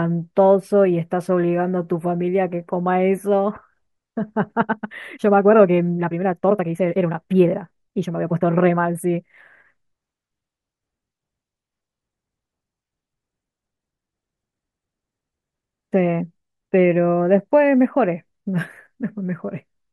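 A time-stretched section runs from 4.58 to 9.40 s, likely software squeezing speech 1.62 times faster at unchanged pitch, so it sounds rushed.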